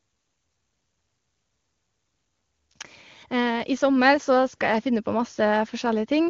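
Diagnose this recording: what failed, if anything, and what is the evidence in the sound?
Nothing has failed at any stage: the speech carries the band-limited character of an AMR wideband (HD Voice) codec, and its clear, unstrained quality points to one of that codec's highest rates, around 24 kbit/s, with the signal path from capture to playback working as intended.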